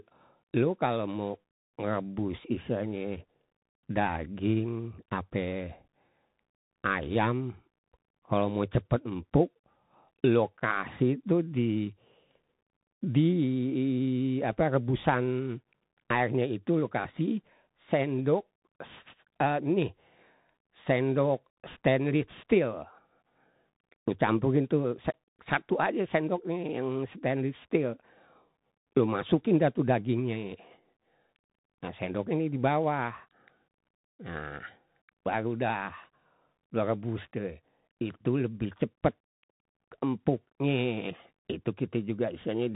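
From start to finish the speech carries Bluetooth CVSD headset codec damage, and it's plainly audible. Nothing gets through above about 3.8 kHz, and a grainy hiss sits under everything. The one-bit up/down coding, which fits a 64 kbps link, can't keep pace on loud high sounds, so those distort and s sounds come out scratchy.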